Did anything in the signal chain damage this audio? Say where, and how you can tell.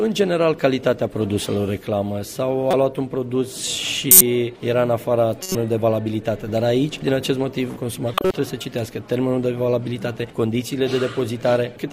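Yes. Corrupt frame decoded at 2.71–2.74 s, 4.11–4.21 s, 5.42–5.56 s and 8.14–8.34 s: the codec decoded damaged frames, producing short bursts.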